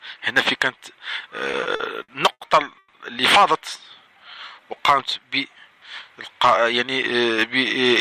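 From 1.51 to 2.42 s the audio has repeated stalls (stutter): five short holds, the longest 80 ms and 210 ms in all, about a quarter of that span. Packets came in late, the jitter buffer kept running dry, and the receiver stretched the last sound to cover each wait. Nothing is lost, but the flow drags and hiccups. On a spectrogram each hold shows as a band of frozen, smeared harmonics, and in the waveform as a run of near-identical repeated cycles.

At 2.78 to 2.95 s comes a call audio freeze. The sound stops moving forward and hangs as a buzzy continuation of the last moment for about 150 ms, trailing into roughly 20 ms of silence before the audio resumes where it left off. This is likely a delivery hold-up that emptied the jitter buffer, adding about 150 ms of delay without dropping anything. A spectrogram shows horizontal, unchanging streaks fading to a blank slit, and the waveform shows a repeating, decaying pattern with a flat stretch at its end.

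From 4.12 to 4.82 s a jitter buffer slow-down draws the sound out. The receiver padded its reserve by repeating single pitch periods many times over, adding about 102 ms, so this stretch plays at 86% speed with the pitch unchanged. Sounds feel elongated. On a spectrogram the features are widened in time while harmonic spacing stays put, and in the waveform individual cycles appear duplicated back to back.

From 6.83 to 7.47 s a jitter buffer speed-up does the reverse. With more audio buffered than needed, the receiver cut out short pitch-period chunks, around 40 ms in total, so the passage runs at 105% speed at the same pitch and sounds a little rushed. A spectrogram shows events slightly compressed in time with unchanged harmonic spacing, and the waveform shows small seams where cycles were spliced out.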